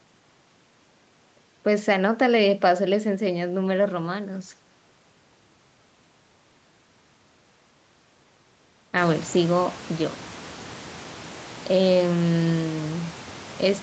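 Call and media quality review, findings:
No faults found in this call audio.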